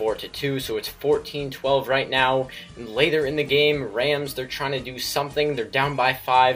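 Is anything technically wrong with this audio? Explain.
No, nothing technically wrong can be heard here.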